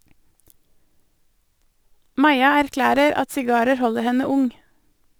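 From 2.77 s to the end of the speech, a gritty, inharmonic fizz clings to louder and brighter sounds, sitting roughly 30 dB below them. This is crude rate conversion: samples were simply dropped, nearest-neighbour style, with no filtering, in a pattern that fits 48 kHz to 44.1 kHz.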